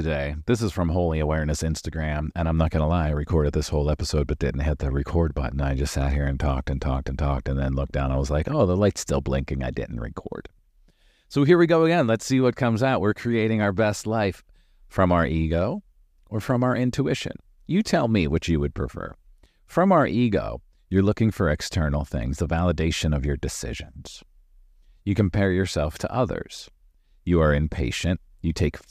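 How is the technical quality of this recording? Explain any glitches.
The technical quality of this recording shows no glitches to explain.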